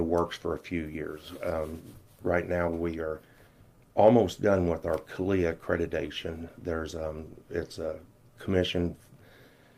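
No technical faults can be heard anywhere in the recording. Nothing in the sound points to a dropout, a glitch or a break in the signal chain.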